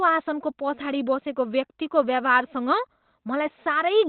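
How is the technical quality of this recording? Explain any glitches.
The technical quality is poor, held back by one fault that runs through the whole recording.

Opus compression, present from start to finish, is the likely cause. At a low bitrate, around 16 kbps to judge by the sound, the encoder appears to have dropped into its narrowband speech mode, discarding everything above about 4.2 kHz and modelling the speech coarsely. The result is plainly audible damage: the speech sounds muffled and telephone-like, lacking crisp consonants, with a hoarse, rough texture.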